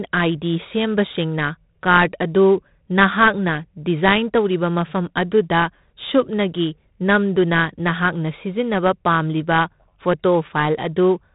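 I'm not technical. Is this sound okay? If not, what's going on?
No. Throughout the speech there is 4-bit ADPCM compression: each sample is stored as a crude step from a guess, leaving a gritty hiss that swells with loud syllables and vanishes in pauses, unlike steady background hiss. Nothing above 3.9 kHz remains, so it sounds dull.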